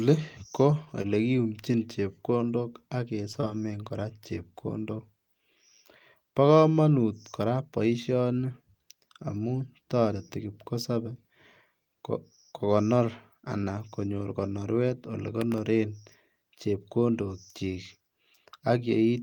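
From 0.71 to 1.06 s the speech turns choppy: repeated packet loss (robotic sound). Four gaps of up to 20 ms each arrive in quick succession, and each is patched by stretching the preceding sound, so about 13% of that third of a second is synthetic fill. On a spectrogram the harmonics go smooth and repetitive in short blocks. The waveform shows small, overly regular stretches between normal cycles.

Just after "chepkondok ak" there are two instances of short concealed packet loss, at 3.33 to 3.36 s and 3.40 to 3.44 s, with a third at 4.97 to 5.00 s. Each time roughly 20 ms of audio failed to arrive and the receiver extended the previous sound before blending back in. Each one is heard as a brief smear or wobble. A spectrogram shows a short frozen patch where the formants stop moving, and the waveform shows a few suspiciously uniform periods.

At 15.41 to 15.58 s, right after "konyor konoruet ole", a burst of processor overload crackle rides on the speech. 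About ten audio buffers in a row missed their deadlines. The very short spacing of the clicks points to buffers well under a millisecond. Each missed buffer left a tiny hole of silence with hard edges, producing a gritty tearing. The waveform shows clustered flat dropouts, and the spectrogram shows thin vertical broadband streaks.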